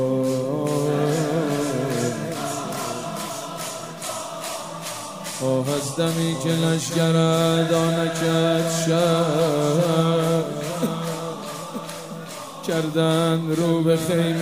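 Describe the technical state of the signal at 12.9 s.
At 12.9 s the signal is intact, with no dropout, distortion, glitch or other fault audible at that point.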